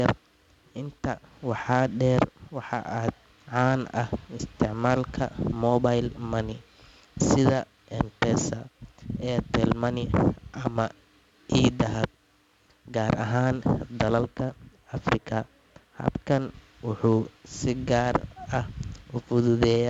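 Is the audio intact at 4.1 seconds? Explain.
No. At 4.1 seconds, as throughout the clip, the speech carries a gritty hiss that rises and falls with its loudness, sharp attacks sound roughened, and the sound is dull, with nothing above 7.7 kHz. This is heavy 4-bit ADPCM compression: each sample is coded as a coarse step from a prediction, so the error rides on the signal and the step lags on sudden onsets. The bandwidth and rate fit a 64 kbps stream at about 16 kHz.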